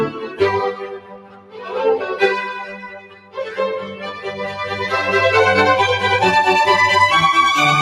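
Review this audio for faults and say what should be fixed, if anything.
A noise suppressor built for speech is applied to this sound, which is not speech. It treats steady, sustained parts as noise and pulls them down. Transients pass more easily than held material, so the level keeps shifting. The gain moves over a range of roughly 15 dB across the clip. The result pumps and thins, with tails and ambience sinking between attacks rather than decaying naturally.

The sound is also cut by the noise suppressor in three places. From 0.1 to 0.41 s the drop reaches about 9 dB. From 0.73 to 1.75 s it goes deeper, to about 14 dB. From 2.65 to 3.39 s it again reaches about 14 dB. In each stretch the suppressor judged the sustained content to be noise. Those passages dip and lose body while the surrounding attacks stay up.

To prevent both faults, bypass speech noise suppression for music and general sound, or switch it to a mode meant for non-speech material.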